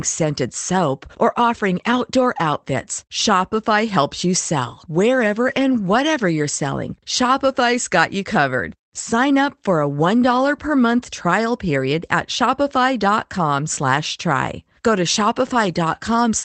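Speech over an Opus call path, with a lost packet rebuilt from error correction from 5.43 to 5.61 s. About 100 ms sounds rougher and noisier, pointing to several lost packets replayed from low-bitrate copies. Unlike plain loss concealment, nothing drops out or smears into a buzzy, fading repeat.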